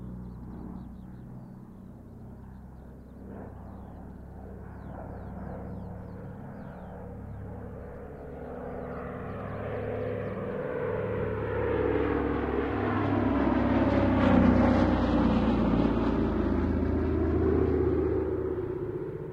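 No technical faults are audible anywhere in this recording of everyday sounds.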